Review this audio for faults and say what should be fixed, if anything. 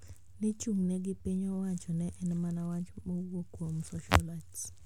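Nothing stood out on listening to this speech recording, so there is nothing here that needs fixing.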